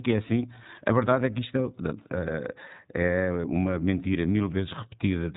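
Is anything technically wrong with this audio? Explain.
Yes. Throughout the speech, the iLBC codec has left plainly audible damage. Nothing above 3.8 kHz survives, and the voice sounds slightly rough and synthetic, which points to the 13.33 kbps, 30 ms frame mode. Each frame's excitation is coded on its own rather than predicted from the previous one, so fine detail is approximated frame by frame. A plain low-pass filter or G.711 would also sound narrowband but would stay smooth and natural.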